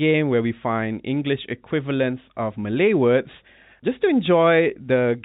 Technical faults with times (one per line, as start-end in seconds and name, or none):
none